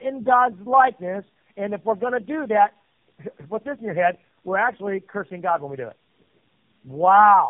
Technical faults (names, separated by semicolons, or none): tandem speech coding